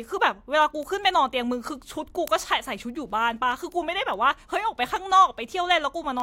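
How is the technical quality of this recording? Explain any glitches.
The recording is marred by a steady train of ticks running under the speech from 0.21 s to 6.20 s. They arrive roughly every fifth of a second, around thirty in all, sharp and uneven in strength. These are word clock ticks: the digital link was read by a device running on its own clock, about 100 parts per million apart from the sender's. Each time the two clocks slip past each other, a single sample is dropped or repeated, producing a click.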